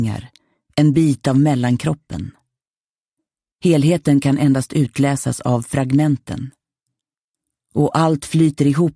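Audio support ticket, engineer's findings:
Nothing stood out on listening, and no issue was found to log against this ticket.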